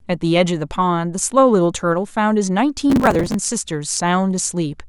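From about 2.90 to 3.34 s the speech picks up a processor overload crackle, a gritty tearing laid over the sound for just under half a second. The processor couldn't keep up, so dozens of tiny buffers, each only a few milliseconds long, missed their deadlines again and again. Each miss just skips that slice of audio, leaving hard-edged gaps that pile up into crackle. Once the load eases, it stops cleanly.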